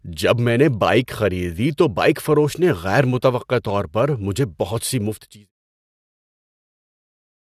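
Nothing stood out on listening to this speech, with only a smooth fade-out from about 5 s that settles by 5.52 s, the gentle, edge-free taper an editor would apply.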